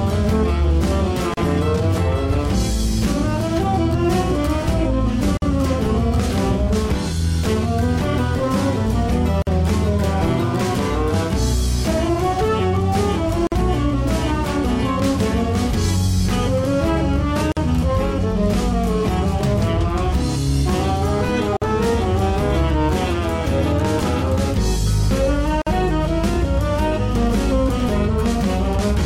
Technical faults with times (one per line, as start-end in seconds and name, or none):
1.34-1.37 gap at a join of encoded pieces
5.37-5.42 gap at a join of encoded pieces
9.42-9.47 gap at a join of encoded pieces
13.47-13.52 gap at a join of encoded pieces
17.52-17.57 gap at a join of encoded pieces
21.57-21.62 gap at a join of encoded pieces
25.62-25.67 gap at a join of encoded pieces